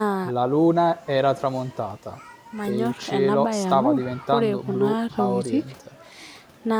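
Nothing faulty can be heard in this speech recording.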